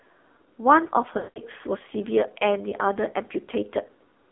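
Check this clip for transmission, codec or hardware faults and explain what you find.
The clip shows two faults: a heavily compressed narrowband mobile codec throughout, and lost speech frames at two points.

AMR narrowband mobile codec, whole clip: a low-bitrate AMR-NB encoder rebuilds the speech from a vocal tract model and sparse pulses, which fits a mode around 6 kbps. The audio is confined to roughly 250 Hz to 3.6 kHz and sounds buzzy, thin and synthetic.

Lost AMR speech frames, 1.18 to 1.39 s and 2.70 to 2.75 s: corrupted frames forced the decoder to reuse its last good pitch and filter settings at falling gain. The 180 ms gap stretches and fades toward silence, and the shorter one gives a brief warbling dip.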